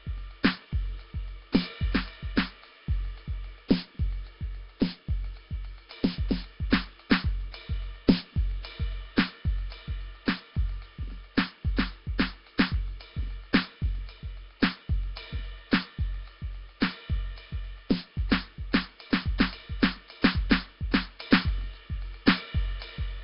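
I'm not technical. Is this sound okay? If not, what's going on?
No. The music sounds rough and hissy from start to finish, with a smeared, underwater quality. Nothing above 5.3 kHz survives, so it also sounds dull. The likely cause is Nellymoser compression, an old Flash codec that squeezes sound hard and fills the gaps with noise.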